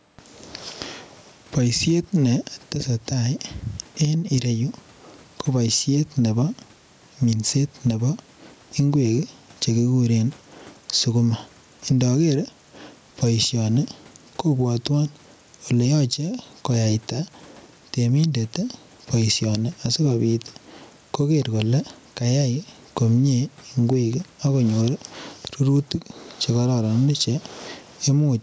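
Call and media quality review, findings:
Gain pumping throughout. Gain swing of around 10 dB. Likely cause: input gain set far too high, with a fast limiter clamping every peak. Speech dynamics squashed. Room noise, about 44 dB below speech.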